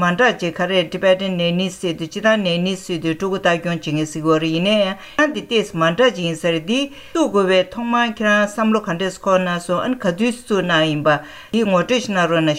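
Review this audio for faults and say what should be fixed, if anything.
Underrun with held sample at 5.34 s: the output buffer ran dry, so the converter held its last value. The waveform shows a 5.3 ms flat stretch, which fits a 256-sample buffer. About 5 ms of audio was lost. Enlarging the output buffer or giving the audio thread higher scheduling priority would prevent it.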